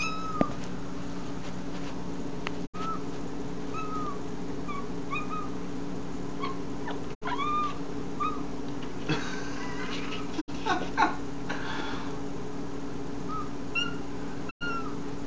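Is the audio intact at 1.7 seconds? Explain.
Yes, at 1.7 s the audio is intact, with no dropout, click, distortion or other fault at that moment.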